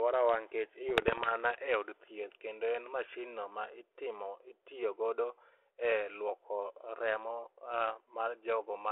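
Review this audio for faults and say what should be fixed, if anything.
Bit errors on the ADPCM link appear from 0.89 to 1.31 s, just before "e od thieth kendo", as pops and rough bursts with brief jumps in level. The speech runs through G.726 at 32 kbit/s, limited to 250 Hz to 3.4 kHz. Each flipped bit, at a rate of a few per thousand, corrupts the decoder's adaptive step size and predictor, so the error rings on for milliseconds. To prevent it, improve the radio link margin or add error protection on the link.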